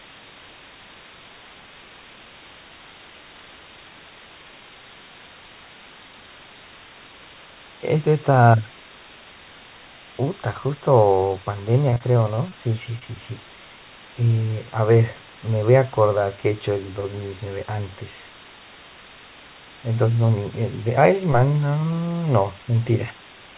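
Speech, carried over a call path whose content stops at 4 kHz, which fits a narrowband codec such as G.711. Low bit depth with dither sets a constant, even hiss about 20 dB below the speech for the whole clip, which points to roughly 7-bit audio. On a spectrogram it shows as a flat, uniform noise floor filling every frequency up to the band edge. In the waveform the silences never drop to a clean line. From 11.9 to 12.53 s, repeated packet loss makes the speech choppy. About six holes, none longer than 20 ms, were each patched by extending the preceding sound. On a spectrogram this appears as a run of short smeared, repeated slices breaking up the harmonics. The waveform shows brief chunks repeating. A short concealed packet loss at 12.99 to 13.03 s leaves a brief smear where roughly 20 ms never arrived and was filled by continuing the previous sound. It shows as a small blurred patch in the spectrogram and a slight discontinuity in the waveform.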